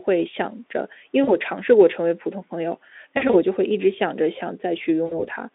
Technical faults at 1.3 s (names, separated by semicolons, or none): VoIP packet loss concealed by the speech codec